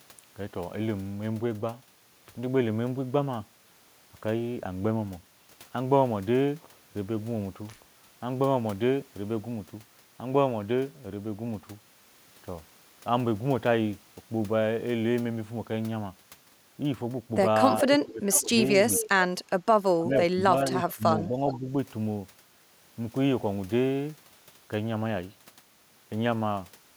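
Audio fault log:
17.87–21.67 s, speech suppressed in double talk: With both ends likely talking at once, the echo canceller could not tell this talker from loudspeaker echo and pulled the level down. The dips fall at 17.87–18.51, 19.09–19.35, 19.97–20.52, 20.7–20.77, 20.95–21.03 and 21.28–21.67 s. The deepest cuts reach about 20 to 25 dB. The milder ones near 20.7 and 21.3 s, at about 5 dB, only duck it briefly.
18.96–19.09 s and 21.48–21.58 s, echo leak: The far-end echo canceller likely left part of its microphone's loudspeaker pickup in place and sent it back. Each time, a copy of the speech returns about 0.42 s late, at roughly 10 dB and then 15 dB below the direct sound. Both returns are brief scraps, and each lands beside a double-talk dip, at 19.09 and around 21.5 s.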